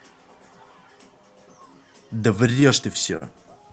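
Speech, and from 2.47 to 3.51 s it hits repeated stalls (stutter): the packets were arriving late or slower than playback, so the jitter buffer kept running dry, eight times in that stretch. Each time the receiver stretched the last bit of sound to bridge the wait. The longest hold is 37 ms, about 98 ms in total, roughly 9% of that span, and nothing is actually lost. It just drags and hiccups. The call-codec sound and the top end stopping around 8 kHz fit an Opus path.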